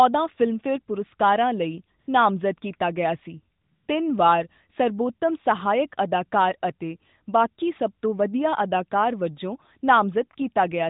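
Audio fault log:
1.99–2.08 s and 3.62–3.88 s, AMR comfort noise: The phone took these short gaps for silence and stopped sending speech for 80 ms after "ਪੁਰਸਕਰਵਾਂ ਲਈ" and 260 ms after "ਨਾਮਜ਼ਦ ਕੀਤਾ ਗਿਆ ਸੀ". The receiver filled each gap with smooth synthetic noise, so the real background switches out. The surrounding narrowband sound is capped at 4 kHz.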